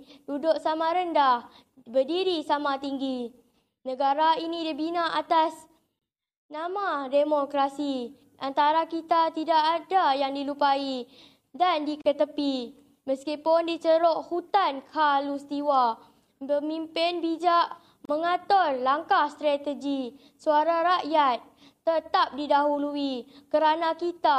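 Brief silences open at 5.99 s, 12.02 s and 18.05 s, lasting 26, 37 and 37 ms, every 6 s. These are gaps at the joins of separately encoded pieces. Untrimmed encoder delay and end padding were left in, so the sound drops out briefly and resumes where it left off.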